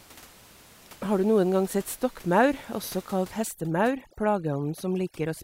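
From 3.44 s to the end, just after "sett stokkmaur også kalt", overdone noise removal sets in: a noise reduction stage applied too strongly switches off individual frequency bands wherever they sit close to its noise estimate. The room noise, about 25 dB below the speech, collapses to near silence speckled with twinkling artefacts, and the speech loses its quieter components. On a spectrogram the floor goes dark with isolated bright dots, and the speech shows ragged, gappy harmonics.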